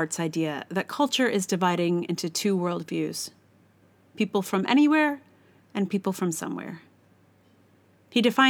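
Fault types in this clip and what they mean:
Nothing here stands out as a fault; the audio just runs as recorded with no glitches, dropouts or other trouble to point at.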